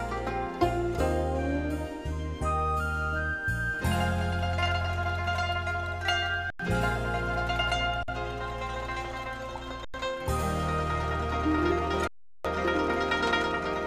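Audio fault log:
6.50–6.60 s, 8.03–8.08 s, 9.85–9.94 s, 12.07–12.45 s: underrun with held sample. The output buffer ran dry for 93, 50, 93 and 372 ms, and each time the converter held its last value, so the waveform flatlines and the sound just stops. Roughly 100, 50, 100 and 400 ms of live audio went missing. The 93 ms gaps fit a 4096-sample buffer.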